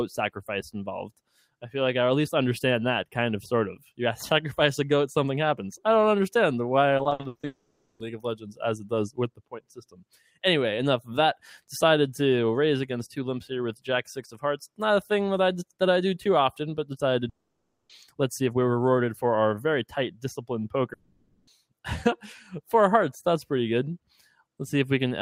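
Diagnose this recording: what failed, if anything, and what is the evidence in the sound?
Call processing: a noise suppressor built for speech is applied to this sound throughout. It treats held material as noise, so the level pumps by about 5 dB.

Sound cut by the noise suppressor at 1.1–1.63 s, 3.76–3.99 s, 8.36–8.6 s, 9.29–10.43 s and 24.03–24.42 s. Steady portions sink by up to about 18 dB.

Network: repeated packet loss from 6.97 to 7.45 s. A run of short holes, each up to 80 ms, is patched by continuing the last sound, which gives choppy, robotic audio.

Likely long network dropout at 7.45–8.01 s, 17.29–17.91 s and 20.93–21.49 s, each losing over half a second. The 17.29 s gap falls almost silent, and the others carry a fading continuation.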